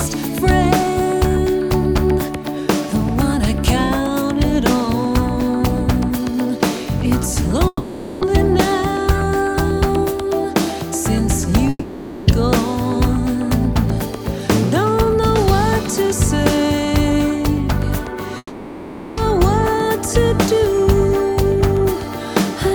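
At 7.67 to 8.23 s, 11.69 to 12.29 s and 18.37 to 19.19 s, the sound smears into a fading buzz. A brief silence follows. Then the audio resumes with a chunk missing. Each gap is likely a long network dropout that the receiver papered over.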